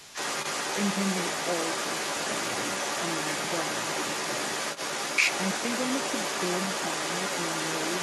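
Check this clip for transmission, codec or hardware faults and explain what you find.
One fault is present, running the entire clip. Other side's voice leaking through, from 0.0 to 8.03 s: a second voice sits under the speech at roughly the same level as the talker. The likely cause is the far end's loudspeaker output reaching the microphone without the echo canceller suppressing it.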